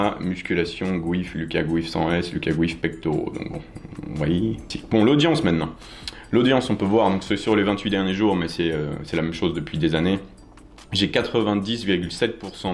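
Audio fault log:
No fault can be heard anywhere in the clip. The sound continues without any disruption from its opening moment to its last.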